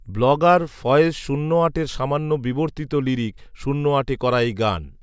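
No technical faults can be heard anywhere in the recording of speech.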